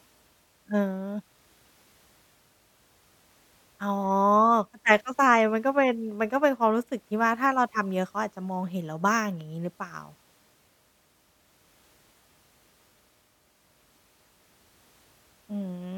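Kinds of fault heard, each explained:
Nothing here stands out as a technical fault; the speech comes across steady and intact the whole way.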